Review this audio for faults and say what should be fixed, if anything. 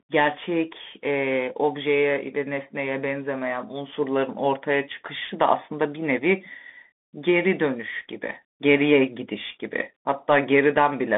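Bluetooth CVSD headset codec damage runs through the whole speech clip. The band sits at about 200 Hz to 3.5 kHz, with nothing above 3.7 kHz. The one-bit up/down step, which fits a 64 kbps link, can't keep pace with loud high sounds, so s sounds turn scratchy over a granular hiss. A plain low-pass filter would sound clean. To prevent it, use a wideband headset profile or a wired microphone instead of the narrowband Bluetooth link.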